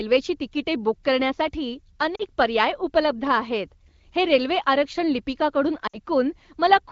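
Speech carried over an AMR wideband (HD Voice) link, where lost AMR speech frames made the decoder repeat its last settings at falling gain. The sound smears and dips at 2.15–2.23 s, just after "तिकिटे बुक करण्यासाठी", and again at 5.87–5.98 s.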